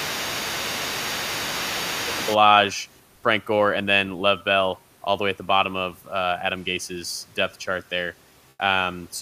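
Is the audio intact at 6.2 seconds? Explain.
Yes, the audio is intact at 6.2 seconds; the only background is the room's own noise, sitting about 38 dB below the speech.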